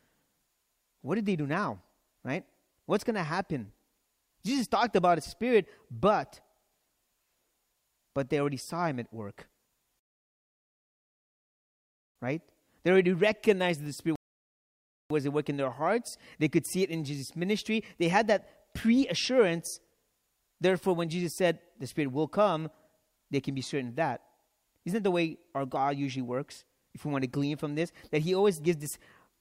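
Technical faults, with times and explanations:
9.99–12.16 s and 14.16–15.10 s, rebuffering stall: The speech stops dead and falls to silence twice. The first gap lasts about 2.2 s, the second about 0.9 s. Each time, the sound picks up exactly where it broke off. No syllables are skipped or repeated. The player ran dry of downloaded audio and waited for more data before carrying on. So nothing is lost, but roughly 3.1 s of dead air is added.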